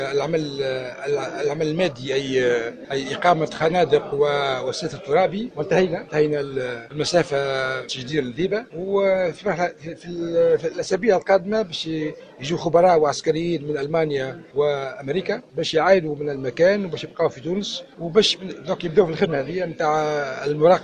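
Damaged data in a compressed stream at 19.22 to 19.27 s: corrupted frames make the decoder lose sync and hunt for the next header, leaving a brief chirp, squawk, click or short hole.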